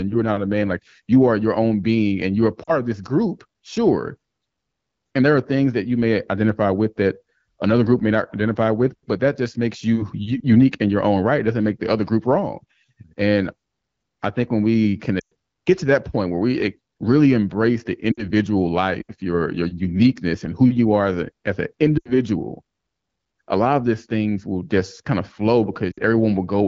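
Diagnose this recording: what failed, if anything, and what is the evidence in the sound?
Lost AMR speech frames at 2.63–2.71 s, 15.19–15.32 s (between "I think when we" and "get to that point"), 18.12–18.29 s, 21.97–22.13 s (after "as a as an") and 25.92–26.00 s (after "just kind of flow"). This is a network fault: radio errors corrupt frames, and the AMR-WB decoder stretches the last good pitch and vocal tract settings with falling gain. The result is a drop to near silence within two frames, with gaps lasting about 40 to 120 ms, which fits runs of two to six 20 ms frames.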